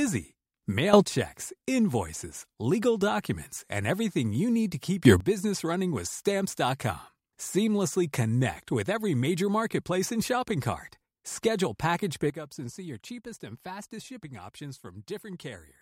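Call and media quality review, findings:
Sudden gain jump, 0.93–1.05 s: speech and noise floor step up about 12 dB together, no ramp. Likely an unramped digital gain setting. Waveform shows a vertical envelope step; spectrogram brightens uniformly across all bands.

Sudden gain jump, 5.05–5.20 s, after "you need to keep", before "running with": about +14 dB block, square-edged on the waveform.

Sudden gain jump, 12.30 s to end: level drops about 12 dB, a sharp vertical edge in the spectrogram.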